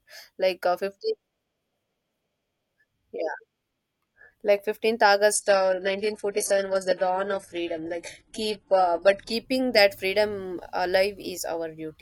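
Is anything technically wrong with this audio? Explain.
Yes, there's one problem. From 5.33 s to 9.33 s, starting just before "that freedom", the speech switches to an adaptive stream at a lower bitrate. The connection slowed, so the player swapped in a far leaner encode. The quality change is sudden, with no gap. The top end drops, with nothing above 11.5 kHz, and codec artefacts jump. That points to a move from something like 96 kbit/s AAC down to a 12 kbit/s HE-AAC stream.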